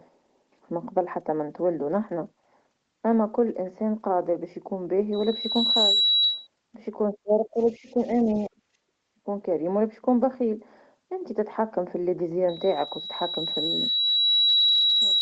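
Speech carried over a call link, its top end stopping at about 8 kHz in the way an Opus wideband path would, is broken twice by loudspeaker feedback squeal at 3.9 kHz. The first runs from 5.13 to 6.47 s, swelling over about 0.7 s. The second starts at 12.48 s, builds more slowly over about 2 s, and lasts to the end of the clip. In both, the microphone is re-amplifying its own loudspeaker output because the loop gain at that one frequency exceeds unity, and the tone ends up roughly 5 dB above the speech. On a spectrogram each appears as a single bright horizontal line at 3.9 kHz that thickens as it grows. The waveform shows a matching rise in envelope. Between 7.11 and 8.29 s the talker's speech is suppressed in double talk, dipping in pieces totalling about 0.7 s by as much as about 15 dB. A shorter, deeper cut of about 30 dB follows from 8.48 to 8.61 s. These most likely come from the echo canceller ducking the near talker while it tries to remove the far end. 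The waveform shows notches carved out of the speech envelope, and the spectrogram shows gaps or faded patches in the harmonics. Overlapping this, from 7.58 to 8.47 s, the other side's voice is faintly leaking through at roughly 35 dB below the speech, likely residual echo the canceller failed to subtract. It shows only as a weak, separate harmonic pattern beneath the main speech. From 9.02 to 9.25 s the background is gated by the echo canceller, with the room sound pulled down about 22 dB for around 0.2 s. This leaves a brief dark gap in the spectrogram's noise floor and a flattened stretch in the waveform before the ambience returns.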